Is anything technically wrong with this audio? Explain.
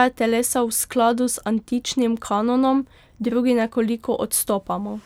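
No, nothing technically wrong stood out on listening to this speech clip.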